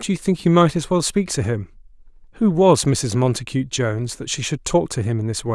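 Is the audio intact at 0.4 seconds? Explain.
Yes, the audio is intact at 0.4 seconds, with no dropout, glitch or other fault at that moment.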